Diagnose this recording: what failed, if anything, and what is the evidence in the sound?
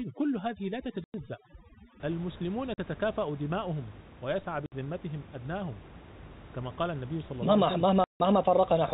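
Overdone noise removal in call processing, from 0 to 2.0 s: the background turns to twinkling near-silence. Unlike codec damage, it stops abruptly at 2.0 s.

Packet loss filled with silence in the network: hard-edged holes at 1.04, 2.74, 4.66 and 8.04 s, lasting 100, 40, 60 and 160 ms. All are multiples of 20 ms, which fits 20 ms packets rather than random dropouts.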